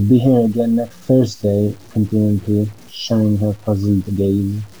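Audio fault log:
throughout, low bit depth without dither: the speech carries a grainy distortion that tracks the signal, growing rougher as the level falls, with the quietest passages sputtering between steps or dropping out to silence. The error sits about 30 dB below the signal. The likely cause is requantization to around 7 bits by truncation with no dither, which ties the rounding error to the waveform so that it is heard as moving grit rather than steady hiss.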